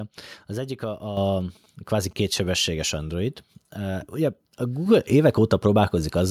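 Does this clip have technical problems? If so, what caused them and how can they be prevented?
Yes. At 1.17 s and again at 4.86 s, the microphone volume stepped up. The call software judged the input too quiet and raised the device's input gain in a single jump, about 8 dB the first time and about 5 dB the second. Speech and background noise rise together instantly, so the level lurches upward in one step rather than changing smoothly. Preventing this means fixing the microphone level before the call and turning off automatic input-gain adjustment in the call software.

From 1.41 s to 2.60 s, GSM signalling bursts come from a nearby 2G phone exchanging short groups of radio bursts with the network while it is not carrying a call. The audio circuitry rectifies that radio energy into sound, giving a galloping dit-dit-dit of short buzzes at a 217 Hz rate, sitting roughly 30 dB below the speech. 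Keeping mobile phones well away from the microphone, cables and interface prevents this interference.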